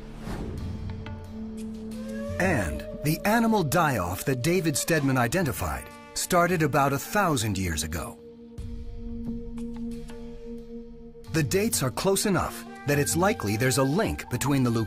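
Channel delay (comb filtering) appears from 12.18 to 13.18 s: one channel trails the other by roughly a single sample, a few hundredths of a millisecond, and summing to mono cancels shared content near 20 kHz, so the sound's extreme top end dulls.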